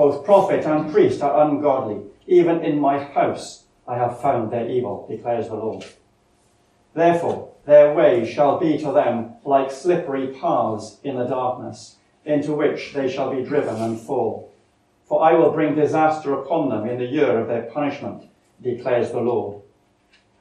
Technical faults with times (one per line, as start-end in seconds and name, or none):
0.00-20.40 MP2 compression